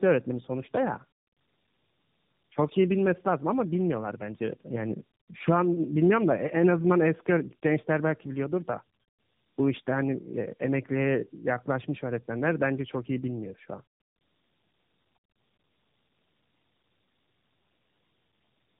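Throughout, the speech carries tandem speech coding. It was coded by a narrowband speech coder, decoded, and coded again, so the second coder worked on already damaged audio. This fits two AMR-NB stages. It sounds rough, muffled and warbly. A spectrogram shows nothing above 3.7 kHz and smeared, blurry formants.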